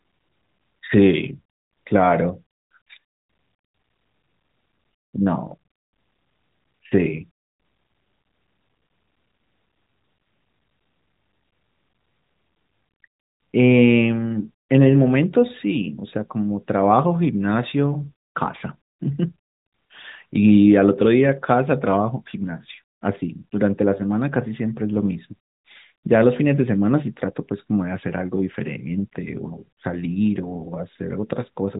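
No technical faults can be heard in this recording.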